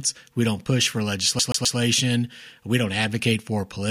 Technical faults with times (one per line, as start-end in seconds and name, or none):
1.39-1.78 CD stuck on one turn